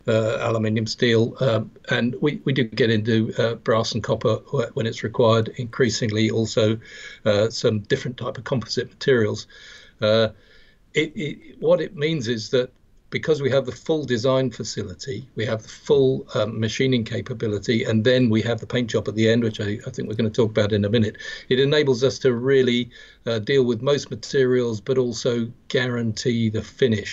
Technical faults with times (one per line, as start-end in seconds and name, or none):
none